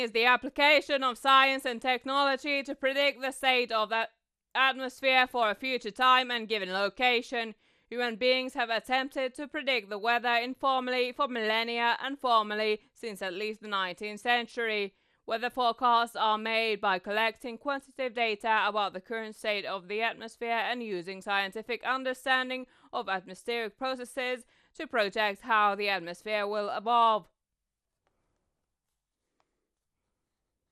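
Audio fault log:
Throughout, MP2 compression: speech sounds dull and gurgling, with nothing above 14.4 kHz. Likely Layer II coding near 80 kbps, starving the upper sub-bands of bits.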